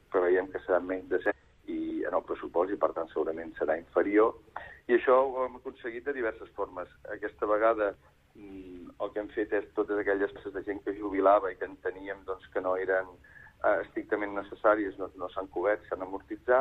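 At 1.26 s and again at 10.31 s, each lasting roughly 60 to 65 ms, the audio breaks into a short chirp or blip caused by damaged data in a compressed stream. Corrupted bytes leave the decoder unable to read those frames, so it loses sync and produces garbage until it finds the next valid frame header. On a spectrogram each event shows as a brief vertical smear of scattered energy. The waveform has abrupt discontinuities at its edges.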